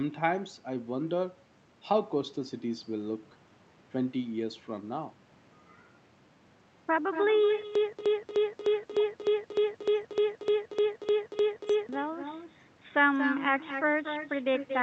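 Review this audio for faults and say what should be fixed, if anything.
Echo with no canceller runs through the whole speech clip. Each phrase returns about 10 dB quieter, roughly a fifth of a second later, thinner than the original. The far end is playing the call on a loudspeaker, and its microphone sends that sound back without any cancellation. Room reverberation would smear continuously from the first instant, but this is a distinct, delayed repeat. Enabling acoustic echo cancellation at the far end, or switching it to a headset, would prevent it.

Stutter with silent gaps occurs from 7.65 s to 11.89 s. A 194.56 ms fragment of the speech repeats 14 times, each followed by 108.54 ms of digital silence, giving a steady 303.1 ms cycle. The audio that belonged in that span never plays. Packet-loss concealment would produce smeared, decaying fill, whereas here the exact same chunk returns at an even pace with dead silence between. 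The likely cause is a stalled stream that replays its last buffer on each retry and then runs empty. Flushing or muting the buffer on underrun, instead of replaying it, would prevent it.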